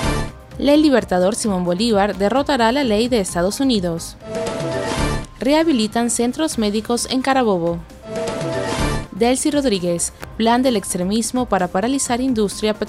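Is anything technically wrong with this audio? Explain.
No, nothing technically wrong turns up anywhere in this audio. No working path is described beyond the sound itself, so there is nothing further to single out.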